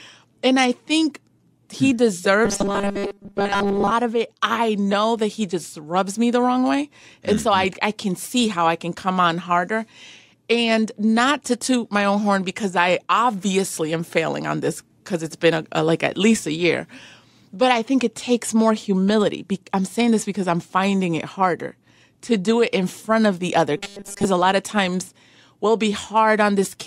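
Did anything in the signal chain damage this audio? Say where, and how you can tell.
Yes: robotic sound from repeated short buffers at 2.45–3.91 s and 23.77–24.25 s, a rigid 200 Hz buzz, likely from a starved buffer repeating roughly 5 ms blocks.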